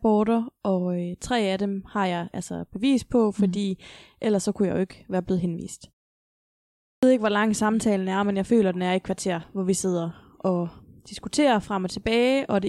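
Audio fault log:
6.79–7.03 s, clipped start after a pause: after about 0.94 s of silence, the output device had dropped into a low-power or unlocked state and was not ready when the sound resumed, so the first 0.24 s of the next stretch of speech never reached the output. The speech therefore bursts out of silence already under way, its opening sounds swallowed, with no gradual onset to soften the entry.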